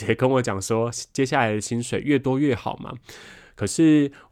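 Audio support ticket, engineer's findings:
No faults found.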